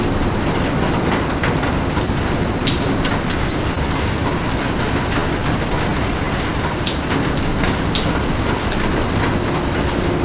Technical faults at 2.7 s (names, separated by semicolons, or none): scattered short gaps